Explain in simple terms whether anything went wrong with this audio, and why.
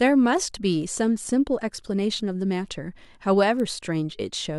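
Between 0.82 and 3.60 s the speech carries word clock ticks: about three sharp clicks, roughly one every one and a half seconds. The receiving device's clock runs slightly off the sender's, around 15 parts per million, so each slip drops or repeats a single sample.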